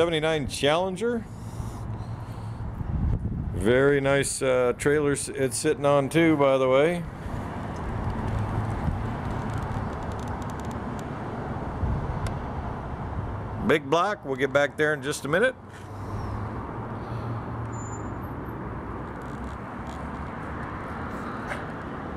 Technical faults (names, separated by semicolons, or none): none